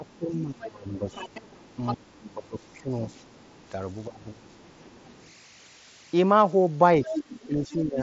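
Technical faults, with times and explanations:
throughout: converter idle tones. A faint steady whistle near 2 kHz, about 27 dB below the speech, sits in pauses instead of tracking the voice. An undithered delta-sigma converter locks into repeating bit patterns.
0.0–1.16 s, 1.76–2.93 s, 4.07–4.49 s, 7.04–8.01 s: speech suppressed in double talk. The talker's own voice drops by around 10 to 25 dB in patches while a second voice is present, likely an echo canceller turning down both sides. It differs from leakage because the main voice itself shrinks.
0.06–1.95 s, 2.62–3.69 s, 4.5–5.32 s, 7.04–7.72 s: other side's voice leaking through. A second voice, from about 10 dB to about 35 dB below the talker, is likely loudspeaker echo left in the microphone. It adds sound rather than removing it. The wideband headset link is audible as its band limit just under 8 kHz.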